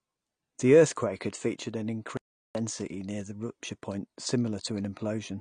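Throughout the speech, a dull, smeared quality with fizzy, warbling sibilants points to AAC compression, likely AAC-LC at a low bitrate around 32 kbps. Nothing sounds above 9.8 kHz, and unlike plain low-pass filtering, the damage shifts and swirls from frame to frame.

From 2.17 to 2.55 s, after "earthquake had featured an", the audio drops out to silence for about 0.38 s before "near the rupture point". The gap is silent with no room tone, unlike a noise gate or fade, so the input was likely lost while recording continued.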